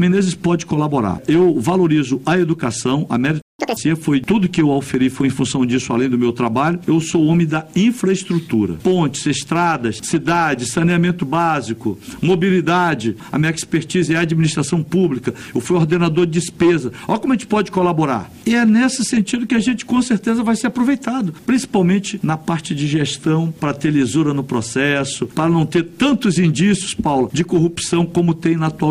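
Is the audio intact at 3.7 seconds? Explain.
No, it isn't intact. From 3.59 to 3.77 s the sound runs at double speed, a catch-up at higher speed: after a stall, the player drains its backlog by resampling, so tempo and pitch rise together, the pitch by nearly an octave, before snapping back to normal. Because pitch moves along with tempo, this differs from time-stretched speedup, which keeps pitch steady, and from a dropout, where audio is skipped rather than rushed.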